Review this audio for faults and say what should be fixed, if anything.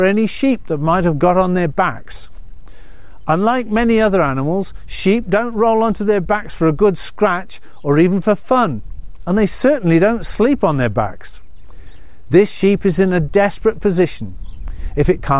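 No faults found; nothing needs fixing.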